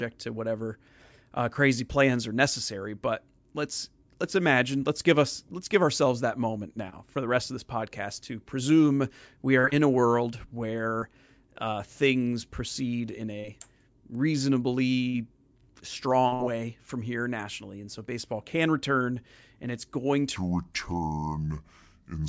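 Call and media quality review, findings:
Wrong sample rate, 20.36 to 22.29 s: speech slows to 0.667x and drops 7 semitones, sounding low and dragging. Probable component: output stage. Samples played at the wrong clock without conversion; the two-thirds ratio fits 24 kHz audio played at 16 kHz.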